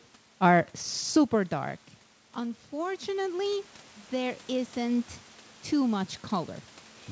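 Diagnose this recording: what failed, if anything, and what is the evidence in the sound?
The call processing's automatic gain rising is audible from 1.31 s to 5.17 s. Around 1 s the voice drops by about 15 dB as the talker moves back, and the gain control responds by slowly raising its gain, by about 8 dB in total, over nearly four seconds. Unlike a talker simply moving closer again, the room noise swells along with the voice, because the whole signal is being amplified together.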